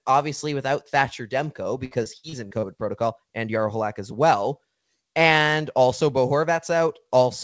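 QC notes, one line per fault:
1.85–2.66 s, repeated packet loss (robotic sound): six dropouts in quick succession, the longest about 59 ms, end just before "protocol and". Each hole is bridged by stretching the preceding sound, so roughly 29% of the span is synthetic fill and about 240 ms of real material is missing. That gives a choppy texture with pieces missing. Band stops at 8 kHz, which points to a G.722 call link at 64 kbps.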